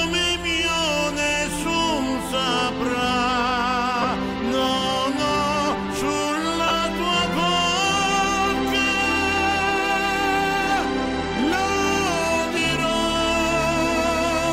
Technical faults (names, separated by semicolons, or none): lost LE Audio frames